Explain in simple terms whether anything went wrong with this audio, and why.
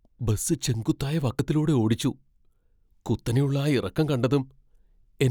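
Something did go wrong, once. At 1.39 s, right after "ബസ് ചെങ്കുത്തായ", the speech skips forward. A tiny slice, about a fiftieth of a second, is gone. The sound on either side is butted together with no gap. This is audio missing between chunks. The likely cause is a recorder that saves sound in two-second blocks. It dropped a sliver while closing one block and starting the next.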